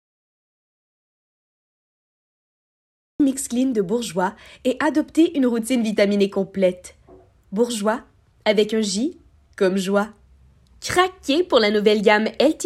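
Audio dropout to silence from the start to 3.2 s: the clip opens in silence, without even room tone, then sound arrives abruptly mid-flow. The input was likely cut off, by a dropped link or mute, while recording continued writing zeros.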